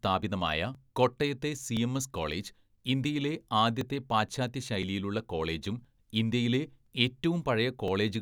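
From 0.75 s to 7.88 s the speech carries a regular tick, about seven in all, spaced 1.02 s apart and audible only where there is signal. These are periodic USB or driver dropouts. At a fixed interval something briefly stalls the USB bus or the audio driver, and a few milliseconds of audio are skipped rather than replaced with silence. The waveform jumps across each small gap, and that abrupt splice is what makes the click.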